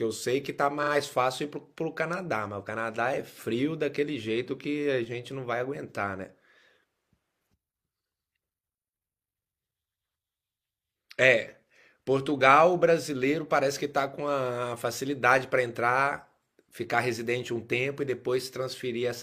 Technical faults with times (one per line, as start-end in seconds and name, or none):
0.79-0.88 repeated frames